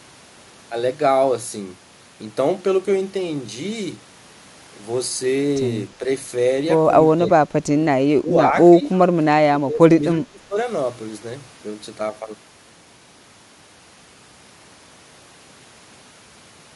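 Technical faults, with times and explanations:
7.63 to 10.57 s, speech suppressed in double talk: the speech level dips repeatedly at 7.63, 8.19, 8.49, 8.79 and, longest, from 9.51 to 10.57 s. The short dips fall by about 5 to 15 dB, and the last holds down by about 20 dB for much of a second. The likely cause is far-end talk overlapping this talker, leaving an echo canceller unable to tell local speech from loudspeaker echo, so it attenuated both.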